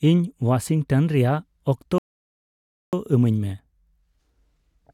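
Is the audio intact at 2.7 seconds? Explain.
No. At 2.7 seconds you're sitting inside a rebuffering stall that runs from about 1.98 to 2.93 s. The player drained its store of downloaded audio and just waited for more to arrive, so the speech drops to dead silence for roughly 0.95 s, then picks up exactly where it left off. Nothing gets skipped; the clip just gains close to a second of gap it shouldn't have.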